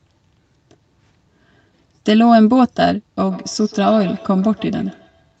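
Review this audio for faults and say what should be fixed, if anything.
From 3.3 s to the end at 5.4 s there's a feedback echo between two devices: the speech comes back roughly every 150 ms, peaking at about 21 dB below the direct sound. It sounds like two devices in the same room on one call, with one playing what the other's mic sent, and that mic catching it again. Each echo canceller only removes its own device's playback, so the loop slips through, with the usual top ending near 8 kHz. To prevent it, mute or headphone one device, or keep only one device in the room joined with audio.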